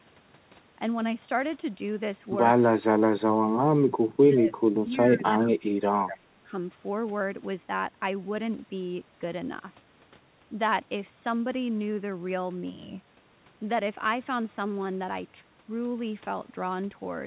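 At 2.73 to 3.48 s and 4.28 to 6.5 s the speech sinks by around 30 and 25 dB, likely speech suppressed in double talk, with the echo canceller mistaking this talker for loudspeaker echo.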